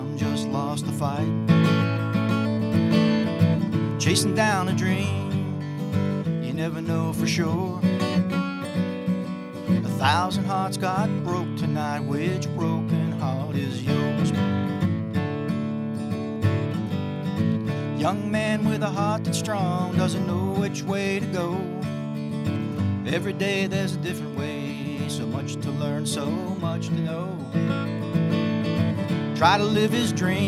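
Nothing is technically wrong with the audio in this clip.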